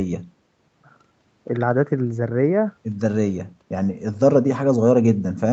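Nothing in this speech stood out as a technical problem on listening, with the sound simply topping out around 8 kHz as expected of a call line.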